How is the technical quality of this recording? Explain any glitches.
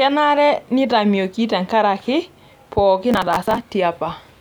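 The recording has one clear glitch near the end.

From 3.12 to 3.60 s there is processor overload crackle. The processor repeatedly misses its deadlines for buffers of roughly 10 ms, about thirty of them over that stretch, and each missed buffer is simply skipped. The skips leave hard-edged gaps that add up to a gritty tearing over the speech. A waveform would show the speech chopped by many short dropouts with abrupt edges. A spectrogram would show dense vertical broadband streaks through that half-second.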